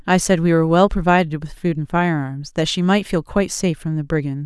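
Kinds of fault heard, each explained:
No technical faults are audible.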